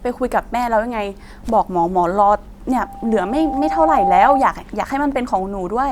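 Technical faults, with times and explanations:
2.77 to 4.55 s, loudspeaker feedback squeal: a single tone near 792 Hz rises out of the speech and swells over roughly a second, ending up about 5 dB louder than the speech itself before it stops at 4.55 s. The microphone was hearing the loudspeaker it fed, and at that one frequency the round trip through the system returned more than it sent, so the tone kept feeding itself and growing.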